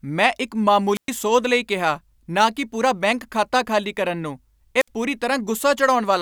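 A wireless microphone squelch dropout occurs twice: the FM signal fades until the receiver mutes. After "ਮੈਂ ਇੱਕ", at 0.94–1.10 s, hiss rises into a 114 ms silence before "ਸੋਧ ਲਈ ਕਿਹਾ ਨਾ". At 4.79–4.88 s, after "ਖਾਤਾ ਖਾਲੀ ਕਰਨ ਨੂੰ", a 61 ms hole follows.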